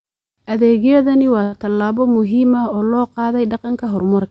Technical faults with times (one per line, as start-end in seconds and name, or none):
1.43-1.54 short stall from a late packet